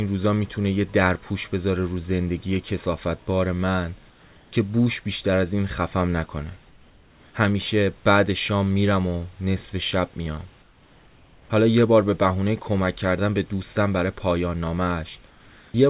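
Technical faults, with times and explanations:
4.1–4.52 s, 6.7–7.34 s, 10.62–11.5 s and 15.3–15.74 s, comfort noise in place of the background: in each pause the real background, about 30 dB below the speech and band-limited to 4 kHz by the call path, turns into a smooth, featureless hiss about 1 to 2 dB quieter. The likely cause is discontinuous transmission, where the sender stopped sending during the pauses and the receiver filled them with synthetic noise.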